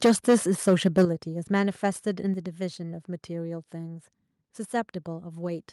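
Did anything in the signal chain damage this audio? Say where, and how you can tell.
Yes. The first problem sits at the converter: microphone overload from 0.04 to 0.36 s and again from 0.67 to 1.05 s. The loudest parts of the speech come out harsh and crackly because the waveform tops are flattened, roughly a sixth of the samples in the first stretch and fewer in the second. That's consistent with peaks landing about 8 dB and about 5 dB past full scale, likely because the mic input gain was set too hot.

The second problem is in call processing: the microphone volume is stepped down three times, at 0.06 s by about 2 dB, at 1.05 s by about 8 dB, and at 2.34 s by about 4 dB. You hear the voice and the room noise sink together in a single instant rather than fading. The big drop landing right as the second clipped stretch ends points to the software's gain control likely reacting to the overload by cutting the device input level.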